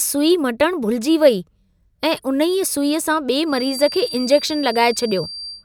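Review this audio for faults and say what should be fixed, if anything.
A feedback whistle runs from 3.43 s to the end at 5.65 s. It's a steady 4.7 kHz tone about 15 dB under the speech, swelling and fading slowly in level. It's likely a speaker-to-mic loop sitting right at the feedback point. Lower the mic gain or move the speaker away from the mic.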